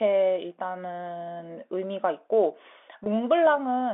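Speech over a telephone line, band-limited to roughly 250 Hz to 3.6 kHz by the line and carried with G.711 coding. At 3.04 to 3.06 s there is packet loss with pitch repetition. About 20 ms of audio goes missing, which fits a single lost packet. The receiver fills the hole by repeating the last pitch period. Because the gap is so short, it never fades to silence. Instead the sound briefly holds and turns slightly buzzy before normal speech resumes.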